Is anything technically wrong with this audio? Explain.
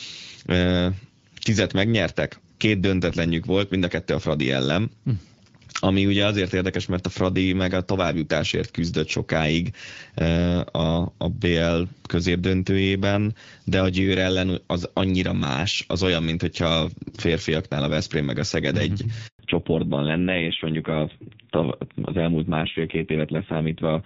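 Yes, there are two linked faults near the end of this speech clip.

At 19.27 s there is a handover gap. The call was passed from one network to another, and for 120 ms no speech frames arrived. The voice dies away quickly and leaves a clean, complete silence until 19.39 s, when the new link picks up. Packet loss is usually patched over with smeared, buzzy concealment. This gap is true silence followed by a change in the line's character, which marks it as a network switch rather than scattered loss.

From 19.39 s to the end there is a fallback to narrowband. Before the switch the audio has the openness of HD Voice (AMR-WB), and its codec damage is light. After it, everything above 4 kHz is gone, so sibilants lose their edge and the voice turns duller and rougher. The coarse, raspy texture points to a low-rate narrowband codec at around 5.9 kbit/s. A simple low-pass filter would only dull the sound. 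Here the band loss arrives together with this added roughness, exactly at the handover, so a different codec has taken over.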